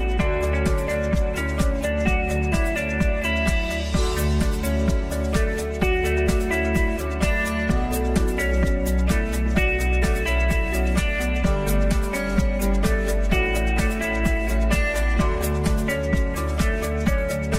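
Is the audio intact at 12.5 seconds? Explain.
No. At 12.5 s there is channel delay (comb filtering), present throughout the clip. One channel arrives around 5 ms late and is summed to mono. Shared content cancels at fixed, evenly spaced notches from about 100 Hz upward. It sounds hollow and phasey.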